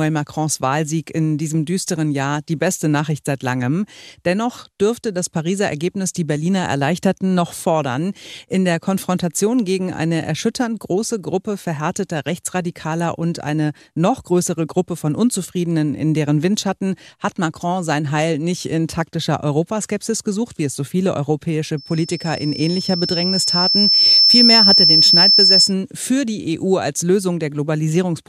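A microphone hearing its loudspeaker runs away at 5.3 kHz from 21.77 to 25.74 s: a feedback squeal swelling over two seconds above the speech.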